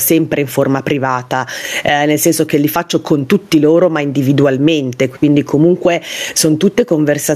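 The clip is speech, and gain pumping runs through all of it. The gain is pulled down on every loud sound. The level swing is large, around 15 dB. Loud and quiet passages sit unnaturally close together, so the sound feels squashed and breathing. The likely cause is input gain set far too high, with a fast limiter or compressor clamping down on each peak.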